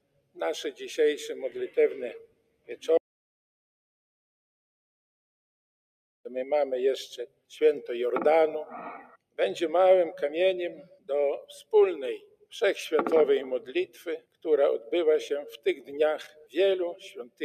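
A speech-tuned noise suppressor has been left running over material it wasn't built for, so it keeps treating sustained parts of the sound as noise. Across the whole clip the level breathes up and down by something like 10 dB. Onsets punch through, but anything held or decaying gets pulled down behind them, which gives a pumping, fluttery feel and thins out the tails.

On top of that there are eight spots where the noise suppressor cuts the sound much harder than the rest. These are at 0.01–0.38 s, 2.19–2.85 s, 7.27–7.51 s, 9.03–9.39 s, 10.81–11.1 s, 12.19–12.52 s, 13.67–14.46 s and 16.28–16.55 s. Most dip by about 21 dB, the one at 9.03 s by about 20 dB, 10.81 s by about 18 dB and 16.28 s by about 15 dB. Each lasts a few tenths of a second, and you hear the sustained material briefly sink or its decay get chopped short before the level comes back.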